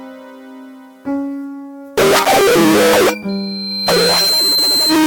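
A piercing single tone at 4.1 kHz rises out of the music from 3.28 s, swelling over roughly a second until it sits about as loud as the music, and holds to 5.02 s. It is loudspeaker feedback squeal: a microphone hears its own loudspeaker, and that frequency circulates with more than unity gain.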